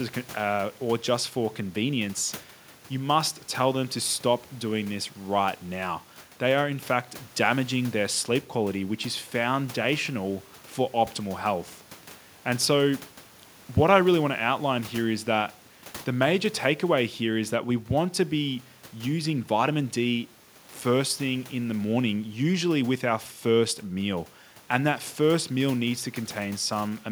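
No technical faults can be heard anywhere in the speech signal.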